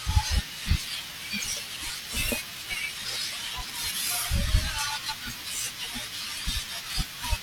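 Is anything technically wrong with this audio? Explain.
Yes. Two brief glitches break the speech, from 2.03 to 2.07 s and from 5.06 to 5.11 s, each a short squawk or blip. This is damaged data in a compressed stream: corrupted bytes make the decoder misread those frames and lose sync until it finds the next frame header.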